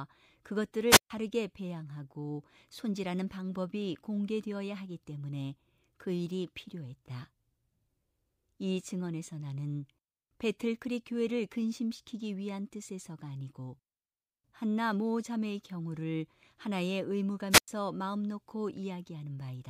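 Speech, interrupted twice by a wireless microphone squelch dropout. The first runs from 0.89 to 1.10 s, the second from 17.50 to 17.68 s. Each time, hiss rises briefly. Then the sound cuts to near silence for about 139 ms, and later about 100 ms. The voice then returns. The radio link from the FM transmitter weakened. The receiver's squelch muted the output until the signal recovered.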